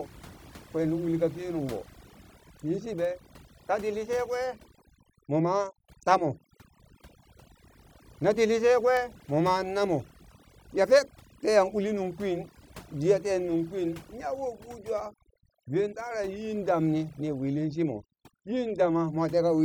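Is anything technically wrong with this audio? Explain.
Yes. Overdone noise removal runs through the whole speech clip. The noise reduction was set far too aggressively, so any frequency band that comes close to its estimated noise level gets pushed down hard or shut off completely. Softer parts of the voice fall below that threshold and are stripped away along with the noise. Between phrases the background drops and breaks up into twinkling, warbling specks.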